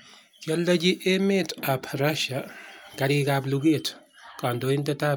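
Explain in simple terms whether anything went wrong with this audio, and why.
Nothing went wrong; the speech comes through without any faults.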